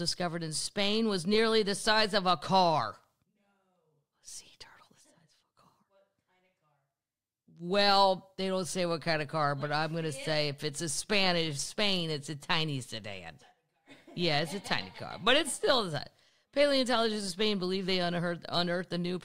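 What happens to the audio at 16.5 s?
Nothing goes wrong at 16.5 s; the audio there plays through intact, with no dropout, click, distortion or other fault.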